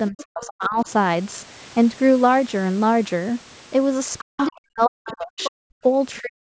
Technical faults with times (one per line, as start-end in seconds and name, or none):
0.10-0.88 speech suppressed in double talk
0.18-0.22 other side's voice leaking through
4.18-4.52 other side's voice leaking through
4.22-5.85 speech suppressed in double talk
5.07-5.51 other side's voice leaking through
6.21-6.41 speech suppressed in double talk